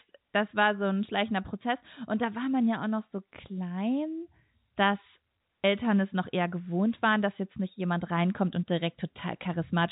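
Nothing stood out on listening to this speech, which sits in the narrow band of G.711 telephone coding with nothing above about 3.8 kHz.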